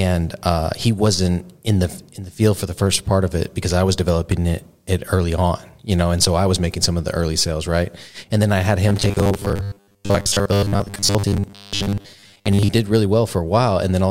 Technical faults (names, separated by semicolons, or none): robotic sound from repeated short buffers